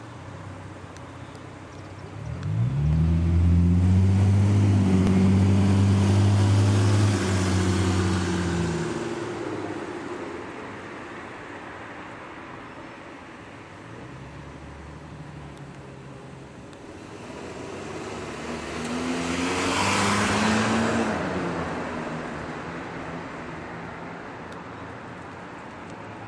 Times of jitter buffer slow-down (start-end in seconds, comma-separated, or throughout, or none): none